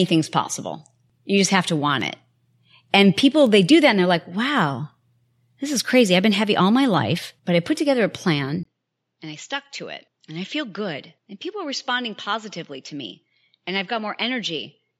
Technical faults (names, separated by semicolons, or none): input switched to a poorer device